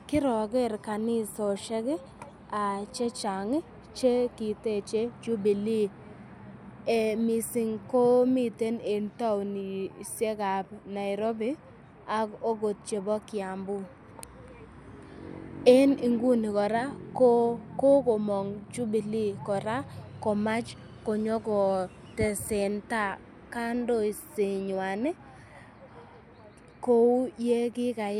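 No technical faults are audible.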